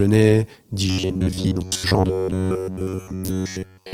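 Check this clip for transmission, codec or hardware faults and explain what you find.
One real fault here: robotic sound from repeated short buffers, running from 0.88 s right through to the end at 3.93 s. The speech collapses into a stiff metallic buzz pitched near 94 Hz. That's most likely the playback side starving for data and looping a roughly 10.7 ms chunk of audio to fill the gap, so most of the real speech gets skipped. The loop length sets that fixed buzz pitch, while the speech underneath still roughly tracks along. The light, full-band Opus compression beneath it is working normally.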